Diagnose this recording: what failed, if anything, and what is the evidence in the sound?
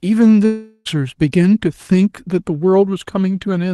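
At the network stage, likely a long dropout: from 0.45 to 0.87 s the speech gives way to a buzzy continuation of the last sound that fades across the whole gap, and the speech resumes with about 0.4 s missing. A short packet loss would be patched in milliseconds, not this long.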